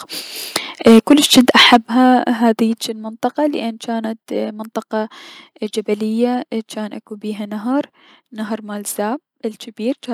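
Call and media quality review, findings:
Harsh, crackling edge on the loudest speech syllables, 0.86 to 1.77 s; peaks flattened, around 7% of samples clipped. Likely microphone overload: input gain set too high, driving peaks about 10 dB past the converter's full scale, so their tops are sheared off.

Sudden level drops in speech and background together at 0.87 s (about 2 dB), 1.86 s and 2.88 s (about 6 dB each), starting during the distorted stretch. Likely microphone volume stepped down by the call software's input gain control, cutting the device level in single steps after detecting clipping.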